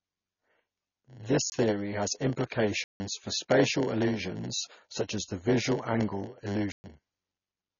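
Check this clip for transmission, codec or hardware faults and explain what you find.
Yes, there's quite a bit going on here: three distinct faults, two running the whole way through and one that drops in a few times.

The block size mismatch (padded) runs the full length. One stage is handing over shorter blocks than the next expects, and zeros fill the remainder. Those regular little gaps make a buzz at 100 Hz, and the speech drags at 0.919 of normal speed while the timbre stays put.

Then there's heavy compression damage throughout. Nothing comes through above 6.9 kHz, and the sound has that watery, swirly quality, with sibilants going chirpy and consonant onsets smeared. The likely cause is MP3 encoding at a low bitrate, something around 24 kbps.

Finally, there are three blocks of digital silence, at 1.50 to 1.52 s (about 22 ms), 2.84 to 3.00 s (160 ms) and 6.72 to 6.84 s (120 ms). 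The audio cuts hard to zero and back, probably from a buffer not filled in time. The first is a brief hole and the longer two are clear holes.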